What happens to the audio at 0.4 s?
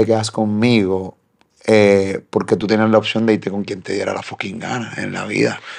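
Nothing goes wrong at 0.4 s; the speech continues cleanly through that moment with no fault to be heard.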